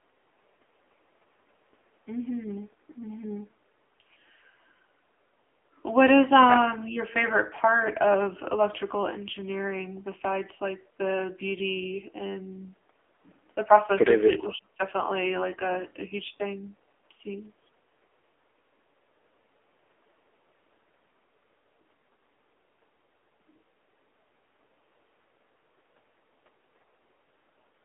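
The speech has passed through the AMR narrowband mobile codec from start to finish. The audio was squeezed into a telephone channel and rebuilt from a vocal-tract model driven by sparse pulses in 20 ms frames. The heavy damage points to one of the lowest modes, around 6.7 kbps. The voice sits in a 300 to 3400 Hz line band with nothing above 3.8 kHz, so it sounds thin, boxed-in, buzzy and noticeably synthetic.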